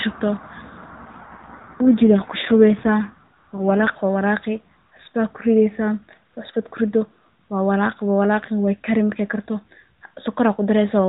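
From about 1.06 s to 3.90 s there's an AMR rate drop: the speech turns rougher and buzzier while the band stays at the usual 4 kHz ceiling, with no gap. That fits the link forcing the codec from 12.2 down to 5.9 kbps before it recovers.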